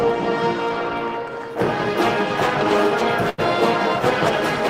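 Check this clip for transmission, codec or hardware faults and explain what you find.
One fault is present: a burst of packet loss at 3.29 to 3.40 s. The receiver concealed 86 ms by extending the last sound and fading it, heard as a brief held buzz or hiss, then resumed with 80 ms of audio skipped. A spectrogram shows smeared, flat bands dimming toward an abrupt jump; the waveform shows a decaying repeated cycle.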